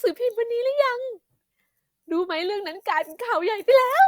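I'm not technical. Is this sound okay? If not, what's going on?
Yes, no faults heard.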